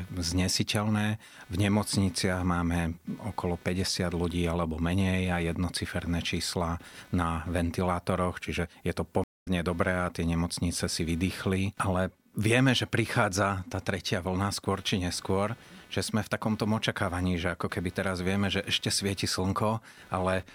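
Throughout the recording, computer activity noise rides under the speech. Shifting load on the processor, graphics card or mouse disturbs the ground that the audio circuit shares with the computer, and that disturbance lands in the signal. It comes through as a buzzy, chirping texture pulsing at around 300 Hz, sitting roughly 30 dB below the speech. It rises and falls with what the machine is doing, not with the talking.

From 9.24 to 9.47 s there is a stream reconnect. The connection dropped, the player fell silent, then reconnected and started a new decoder partway through the stream. That leaves a gap of 210 ms of silence. When the speech returns, it picks up roughly 150 ms further on than where it stopped, so a short stretch is simply missing. The first moment after the gap comes in muted or faded as the new decoder starts up.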